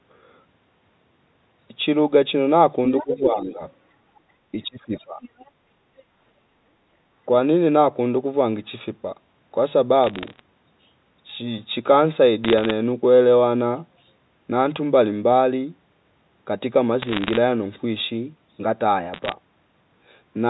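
An echo canceller that was likely not removing all of the loudspeaker signal lets the other side's voice leak through in scraps at 2.98–3.06 s, 4.16–4.2 s, 4.97–5.05 s and 5.21–5.51 s in this speech recording, ranging from about 15 dB to about 40 dB below the talker. Around the same moments the canceller appears to be confusing the two voices, and the talker's speech is suppressed in double talk from 3.03 to 3.61 s and from 4.52 to 5.2 s, dipping by roughly 10 dB and then 20 dB. Later, bit errors on the digital phone line flip individual G.711 samples at a rate well under one percent, and flips that hit a high bit or the sign of a loud sample become sharp ticks, heard as bursts of crackle over steady speech at 10.04–10.4 s, 12.45–12.71 s, 17.02–17.37 s and 19.14–19.32 s.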